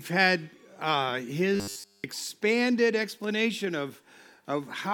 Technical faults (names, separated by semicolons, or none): robotic sound from repeated short buffers